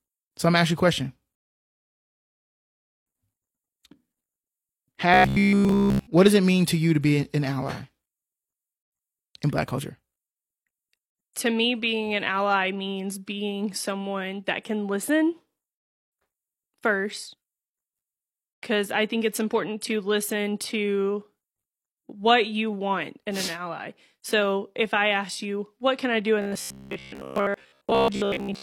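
Speech clip with two kinds of fault. From 1.35 s to 3.06 s, the player ran out of downloaded audio and waited for more. This rebuffering stall drops the speech to silence for about 1.7 s, then resumes exactly where it stopped, adding time without losing anything. From 5.14 s to 6.07 s, and again from 26.42 s to 28.62 s, new audio likely arrived too seldom, so the software kept repeating its last 15 ms of sound. The result is robotic sound from repeated short buffers: a rigid, metallic 66.7 Hz buzz that replaces all of the speech in the first stretch and most of it in the second.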